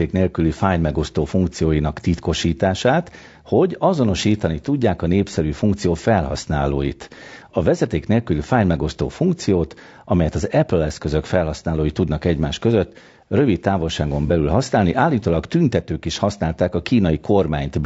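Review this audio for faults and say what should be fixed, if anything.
Throughout the speech, a low-bitrate encode, likely low-delay AAC compression (AAC-ELD) at around 32 kbps, leaves the voice plainly rough and grainy, with noise between harmonics and a synthetic top band. Raising the bitrate or using a longer-frame codec for anything other than live calls would prevent this.

At 14.27 to 14.31 s, just after "egymás között rövid távolságon", AAC frame loss with concealment fills a roughly 30 ms gap, consistent with one lost frame, from the previous spectrum, producing a brief smeared, noisy patch. Protecting the stream with retransmission or forward error correction would prevent this.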